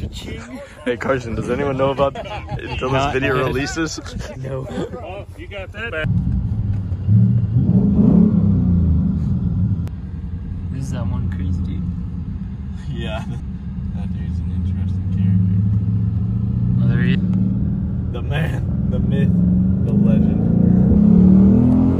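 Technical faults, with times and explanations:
2.15 s, 13.4 s and 17.15 s: audio missing between chunks. The sound jumps forward at each point, with roughly a third of a second gone and the two sides butted together without silence, likely from a processor losing audio as it switched between 4-second chunks.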